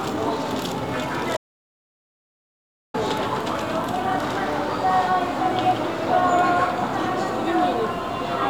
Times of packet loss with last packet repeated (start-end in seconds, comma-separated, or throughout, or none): none